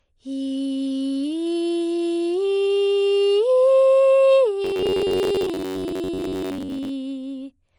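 From the start, the music carries plainly audible damage that likely comes from MP3 compression at a low bitrate, fitting roughly 40 kbps. Weak high components flicker on and off into a swirly, watery texture.

From 4.64 to 6.91 s the sound turns into a rigid metallic buzz at 93.8 Hz, a robotic sound from repeated short buffers, likely from short chunks of about 10.7 ms being replayed while roughly half the real audio is skipped. The waveform shows identical repeating segments, and the spectrogram shows evenly spaced harmonic lines.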